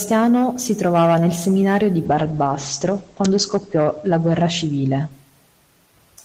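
At 2.09 s a call bitrate drop sets in, from 32 to 12 kbps. Coarser coding and an 8 kHz bandwidth cap make the speech muffled and rough until 5.89 s.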